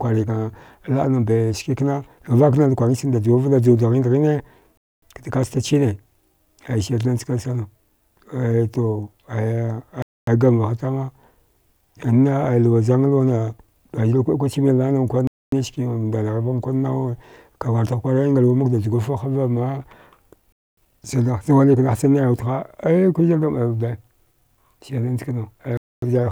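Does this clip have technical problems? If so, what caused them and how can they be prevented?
Yes. The speech has a gap between chunks: 250 ms holes at 4.77, 10.02, 15.27, 20.52 and 25.77 s, just before "kaəsta chine" and "gamvaha tama". The audio was split into 5-second chunks and each join was left with silence. Unlike a dropout, nothing is lost; the speech resumes exactly where it stopped. Prevent it by trimming codec padding and scheduling each chunk to start seamlessly after the previous one.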